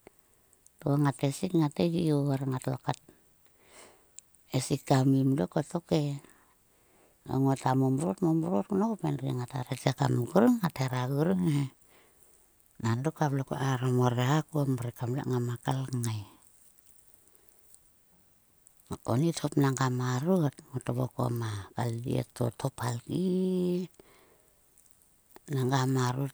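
A nearby switch, motor or static discharge likely arced, and the audio line picked up that burst of electrical energy as an electrical switching spike at 21.36 s. It lasts only a couple of milliseconds and sits on top of the speech as a sharp snap or a tight cluster of clicks. Its peak is around -30 dBFS.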